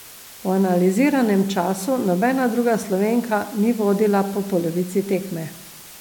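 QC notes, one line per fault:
Throughout: low bit depth with dither. The speech sits on a constant, even hiss roughly 20 dB below it, because samples are rounded to about 6 bits with dither added first, turning the rounding error into steady white noise rather than audible distortion.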